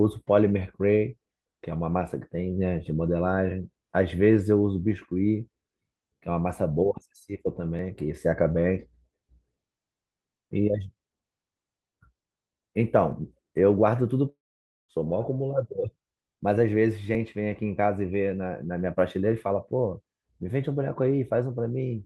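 At 7.79 s and again at 13.12 s, the speech jumps slightly forward, with no gap of silence. Each time, roughly 10 ms of audio is missing. This is a dropped buffer (overrun), likely caused by the program not reading its samples before the hardware overwrote them, so the audio on either side was spliced directly together.

From 14.29 s to 14.91 s there is a long network dropout. The last sound carries on briefly as a fading buzz or hiss, then gives way to about half a second of silence. The speech comes back at 14.91 s further along, with roughly 0.6 s gone. The likely cause is that no packets arrived for that stretch, and the receiver filled the gap by extending the last sound before falling silent.

At 17.15 s a smaller dropped buffer (overrun) gives a skip of only a few milliseconds. It likely comes from the same kind of missed read.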